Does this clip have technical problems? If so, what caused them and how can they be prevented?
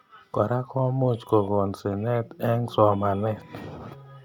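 No, this clip has no technical problems, so there is nothing to trace back to a cause or prevent.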